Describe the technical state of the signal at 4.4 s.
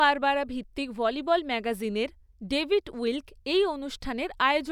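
At 4.4 s the speech signal is intact, with no audible dropout, distortion, glitch or other fault.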